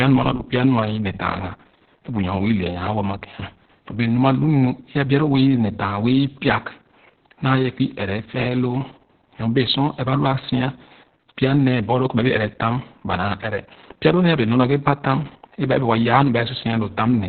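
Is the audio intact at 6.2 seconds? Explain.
No, it's not intact. At 6.2 seconds, as everywhere else in the speech, you're hearing heavy Opus voice compression. Nothing comes through above about 4.4 kHz, so the band has been squeezed down to narrowband and everything sounds muffled. The linear-prediction coder is describing the excitation very coarsely, so the voice comes out hoarse and a bit robotic. That all points to SILK-only coding at a very low bitrate, somewhere around 6 kbps.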